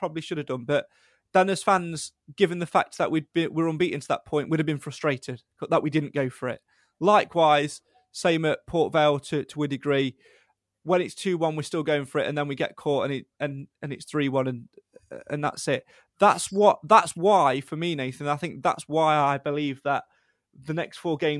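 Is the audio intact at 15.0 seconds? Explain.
Yes, the audio is intact at 15.0 seconds, with the speech running on without any audible fault at that moment.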